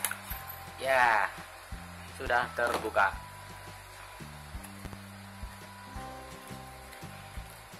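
Two loud pop events cut sharply through the audio, which carries on underneath each one. The first is a single hard pop from 2.27 to 2.30 s. The second, from 4.85 to 4.96 s, is a quick double pop. Each peaks at about 10 dB above the surrounding signal. The likely cause is a sudden voltage step or pulse entering the signal chain, from a plug, a switch, static or a driver glitch, which the following circuitry shapes into a thump.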